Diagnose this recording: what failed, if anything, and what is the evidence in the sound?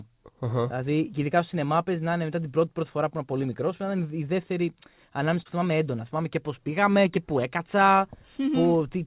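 At the network stage, a short concealed packet loss hit between 5.42 and 5.48 s, after "είναι η δεύτερη ανάμεση" and before "θυμάμαι έντονα". About 30 ms of audio missed the decoder, so the receiver extended the preceding sound and blended back, leaving a brief smear in the G.711 mu-law speech, which has nothing above 4 kHz.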